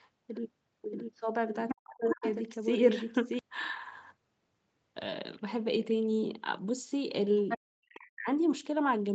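Doubled audio track, 0.91 to 3.39 s: a second full-band copy of the speech runs roughly 0.7 s behind the first, about 5 dB quieter. It has no reverberant tail or room colouring, and it switches on and off abruptly at the edges of that span. A second, slower capture path or an edit leaving two copies out of alignment is the likely cause.

Other side's voice leaking through, 1.68 to 1.75 s and again from 2.08 to 2.34 s: short scraps of a second voice sit about 5 dB below the main speech. The likely cause is the far end playing from the device's loudspeaker into the microphone, with the echo canceller leaving part of it behind.

Speech suppressed in double talk, 1.72 to 2.24 s: the main speech dips steeply, by as much as roughly 40 dB, over about half a second. With both sides active, the echo canceller likely could not separate the local talker from the loudspeaker echo and pulled the whole signal down.

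Other side's voice leaking through, 7.48 to 7.58 s: another brief fragment of the far voice appears at about the same level.

Speech suppressed in double talk, 7.57 to 8.27 s: the speech drops away again, by up to about 40 dB, for around 0.7 s. Throughout these events, the audio stays band-limited at 8 kHz by the Opus call path.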